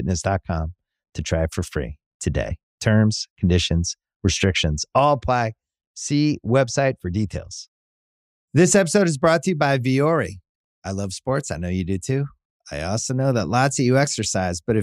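Nothing stood out as a technical fault on listening to this speech recording.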